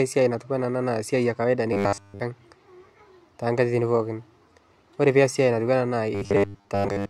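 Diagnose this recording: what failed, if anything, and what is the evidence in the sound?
Robotic sound from repeated short buffers after "e kawaida" (1.73–2.20 s) and from 6.15 s on. There's a metallic 100 Hz buzz, likely a starved buffer looping 10 ms slices.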